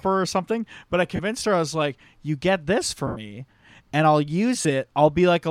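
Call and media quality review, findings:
Lost LE Audio frames on the Bluetooth link at 1.16 to 1.20 s, 3.07 to 3.17 s and 4.62 to 4.65 s. The LC3 decoder conceals each gap by repeating the last spectrum with scrambled phase, so the speech smears into brief noisy hiss. The 90 ms gap fades toward silence. The 30 ms gaps fit three 10 ms frames. Light lossy codec compression is also present.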